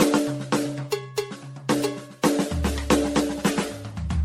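From start to finish the music sounds swirly and hollow, with a watery smear over sustained tones, blurred attacks, and nothing above about 16.5 kHz. The damage is heavier than a single low-rate encode would leave, which fits generation loss: the audio was likely decoded and re-encoded around ten times through MP3 at something like 64 kbit/s. Each pass requantised on a shifted frame grid, stacking fresh noise and spectral holes on the last.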